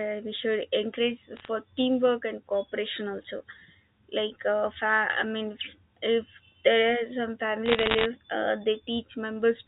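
Bit errors on a digital phone line strike from 1.37 to 1.48 s and again, more densely, from 7.66 to 8.06 s. Flipped bits in the G.711 stream each corrupt a single sample, and a hit on an upper bit or on the sign of a loud sample throws that sample far off, giving a sharp tick. The first burst is sparse, under half a percent of bits, and the second is heavier, around one percent, so the speech is overlaid with crackle while the narrowband telephone tone carries through unchanged.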